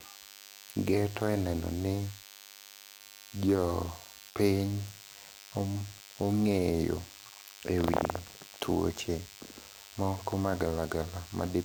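A thin, steady buzz runs under the speech from start to finish. It is DECT cordless phone buzz. A DECT handset or base station nearby sends a brief radio burst every 10 ms. The audio circuitry picks this up and rectifies it, so the bursts become a 100 Hz tone rich in harmonics. It sits roughly 20 dB below the speech.

At 2.97 s there is a short concealed packet loss, lasting until 3.01 s. About 20 ms of the call did not reach the decoder in time. The receiver covered the gap by extending the sound just before it, then blended back into the real signal. The repair is brief. It is heard as a small smear or wobble in the speech rather than as a clean gap.

From 4.29 to 4.38 s comes a burst of packet loss. This is longer, with about 60 ms of audio gone. The receiver stretched the last sound across roughly 62 ms and faded it down as the gap went on. This gives a short held, fading stretch of speech. 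The speech then picks up again further along, and the part in between is simply missing.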